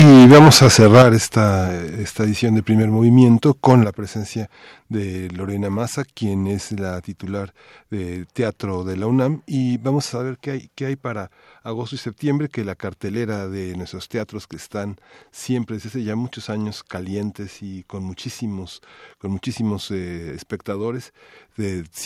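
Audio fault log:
0.00–1.03 s, microphone overload: the opening sound is harsh and crackly, with peaks pushed about 12 dB past full scale and roughly a third of samples flattened. The input volume was likely set too high, so the converter cut off every loud waveform top.
1.02 s, microphone volume stepped down: sound and background drop together by about 9 dB in a single step, right as the distortion ends, as if software lowered the input level in response.
3.70–3.72 s, microphone overload: a brief crackle just before "la presencia de", peaks about 1 dB over the limit with a few percent of samples squared off, so only the tips are cut.
3.84 s, microphone volume stepped down: a further sudden drop of about 6 dB in overall level just before "la presencia de", once more following a clipped peak.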